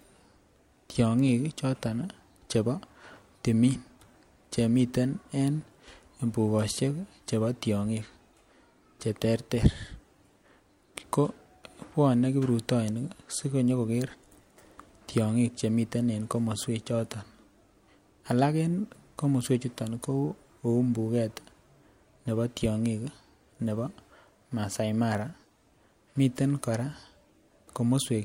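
No technical faults can be heard anywhere in the recording; the speech signal stays continuous and steady throughout.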